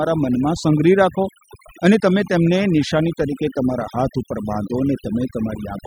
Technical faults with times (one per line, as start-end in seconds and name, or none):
0.00-5.86 overdone noise removal